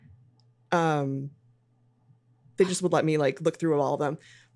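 No technical faults can be heard anywhere in this recording.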